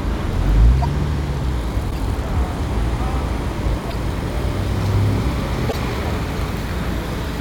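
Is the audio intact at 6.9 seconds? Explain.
Yes, the audio at 6.9 seconds is intact, with no fault to be heard at that moment.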